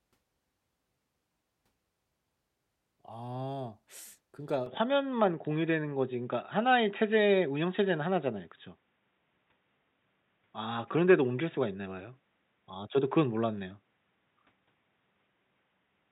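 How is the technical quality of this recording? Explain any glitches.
The recording starts clean but degrades partway through. At 4.66 s the sound changes abruptly and stays that way to the end. The likely cause is an input switched to a poorer device, such as a second microphone or a headset's call mode. That device cuts everything above 3.8 kHz, so the speech turns dull and boxy. There is no gap at the switch. The level shifts by about 5 dB, and a faint new noise floor appears well below the speech.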